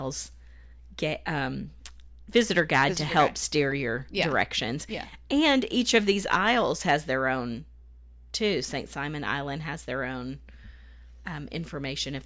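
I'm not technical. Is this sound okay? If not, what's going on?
Yes, this sound is okay, and there's nothing going on that needs fixing.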